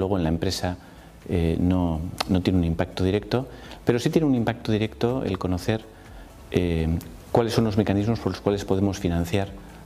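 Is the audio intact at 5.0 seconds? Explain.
Yes, at 5.0 seconds the audio is intact, with no dropout, glitch or other fault to be heard there.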